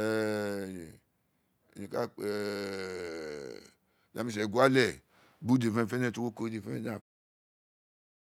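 No faults are audible anywhere in this recording.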